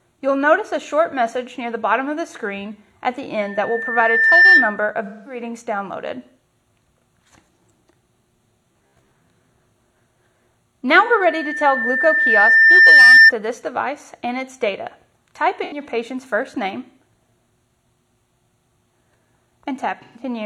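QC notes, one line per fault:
3.41–4.84 s and 10.95–13.32 s, loudspeaker feedback squeal: the microphone picks up its own loudspeaker, and loop gain above unity at 1.8 kHz lets that frequency regenerate. A pure 1.8 kHz tone swells over roughly one second, then two, reaching about 10 dB and then about 15 dB above the programme.
5.04–5.41 s, 11.06–11.12 s, 15.64–15.82 s and 20.02–20.22 s, AAC frame loss with concealment: the decoder lost frames and rebuilt the gaps from the last good spectrum. The 213, 43, 85 and 128 ms gaps sound like smeared, noisy, phasey patches.
8.72–9.11 s, robotic sound from repeated short buffers: new audio arrived too seldom, likely leaving the playback software to loop a roughly 15 ms buffer while about half the real signal was skipped. That repetition imposes a rigid 66.8 Hz metallic buzz on the sound.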